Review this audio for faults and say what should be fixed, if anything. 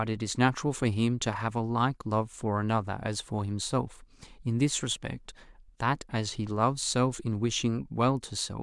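Nothing here needs fixing, since no faults turn up anywhere in the recording.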